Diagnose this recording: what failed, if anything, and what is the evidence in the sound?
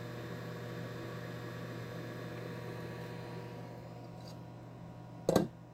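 Nothing in these sounds points to a failure at any stage of the chain, so there's really nothing here to chase down.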